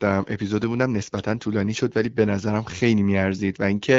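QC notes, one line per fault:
No faults found in this speech clip; the AMR wideband (HD Voice) codec path is working normally.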